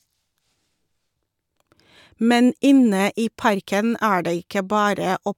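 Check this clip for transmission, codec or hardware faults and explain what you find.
No faults are audible anywhere in this speech recording.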